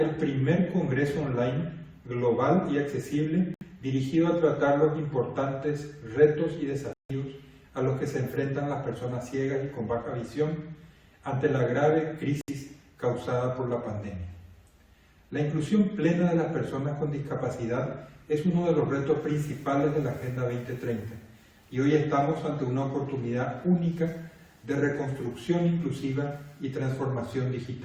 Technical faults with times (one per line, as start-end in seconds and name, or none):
3.54-3.63 corrupt frame muted
6.93-7.11 corrupt frame muted
12.41-12.50 corrupt frame muted